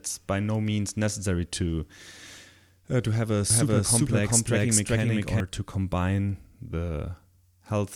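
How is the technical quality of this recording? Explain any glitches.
The recording has one clear glitch, a doubled audio track. From 3.50 to 5.40 s, just after "uh to have a", the speech is joined by a second, equally loud copy running roughly 0.4 s behind. This is likely a second capture through a slower path. The copy is dry and starts and stops abruptly. A spectrogram shows every pattern repeated at the same offset, and the waveform shows overlapping, stacked envelopes.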